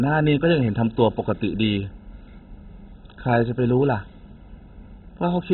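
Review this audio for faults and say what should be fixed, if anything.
The whole clip has the sound of MP2 compression at a very starved rate, likely a Layer II encode squeezed to something like 16 kbps. Nothing survives above about 4 kHz, so the speech is dull and boxy. What remains has a gurgling, grainy roughness. That happens when the encoder can't afford bits for the upper sub-bands and switches them off, then quantises the few bands it keeps very coarsely. To prevent it, re-export from the original source at a sensible MP2 rate, or in a more efficient codec.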